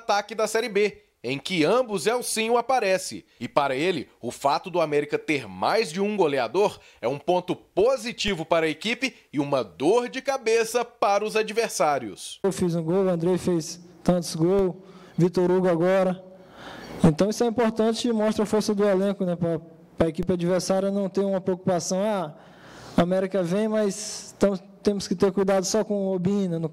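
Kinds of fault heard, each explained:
DC step at 8.28, 14.59 and 20.23 s: the waveform's zero line abruptly jumps by an offset of about -20 dBFS each time, heard as a low thump. The offset then drains away as a 20 Hz high-pass lets it decay, while the sound continues unchanged.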